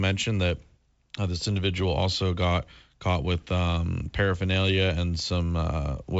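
No faults are audible in the speech, which comes through G.722 wideband telephone coding at 64 kbit/s with bandwidth up to about 7 kHz and at most a faint hiss in the band above 4 kHz.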